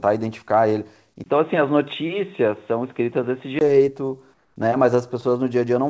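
In this speech clip, a brief gap of about 20 ms at 1.24 s is followed by a duller, boxier sound with nothing above 3.8 kHz and a faint new noise floor. The level stays roughly the same, and full bandwidth returns at 3.61 s. This is likely an input switched to a poorer device, a narrower-band microphone or headset call profile, during recording. From 4.34 to 4.56 s, the natural background is replaced for 220 ms by a smoother, steadier noise about 3 dB quieter, likely comfort noise in place of the background, generated by the receiver while discontinuous transmission paused the sender. The call path's G.722 coding at 64 kbps caps the full-band sections at 8 kHz.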